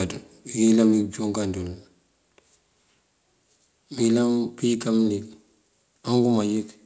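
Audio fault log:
1.02 s, microphone volume stepped down: the speech and the background beneath it drop together by about 3 dB in one abrupt step, with no fade, and stay at the lower level. Because the foreground and the room fall by the same amount at the same instant, this is likely the call software cutting the microphone's input volume after judging it too loud. The band-limited sound, with nothing above 8 kHz, fits the G.722 codec carrying the call.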